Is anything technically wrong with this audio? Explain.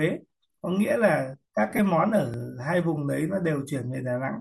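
Yes, two faults. From 1.70 to 1.79 s, lost LE Audio frames: about 45 ms of packets vanished in short runs, consistent with roughly six dropped 7.5 ms frames. The decoder concealed them by reusing spectra with scrambled signs, so the speech briefly turns into a grainy, noisy smear. At 2.34 s, a repeated buffer: a 10 ms block arrived late and the device replayed the previous one once, producing a tiny stutter with a hard click-like join. A faint grainy edge throughout is likely the light touch of Bluetooth LC3 compression.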